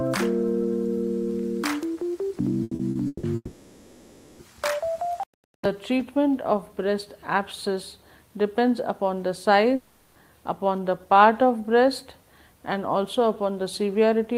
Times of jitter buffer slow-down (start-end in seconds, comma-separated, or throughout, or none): none